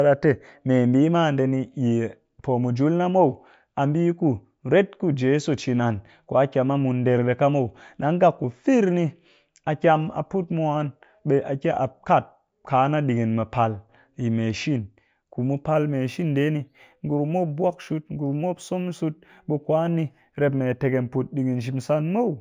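From 15.74 s, after "ku mu", to the end, imaging from linear upsampling (likely a 16 kHz source raised to 44.1 kHz) dulls the top and leaves faint mirror copies between 8 and 16 kHz, roughly 40 dB down. The result is a light metallic shimmer on sibilants that sits above the band rather than folding down into it as aliasing would.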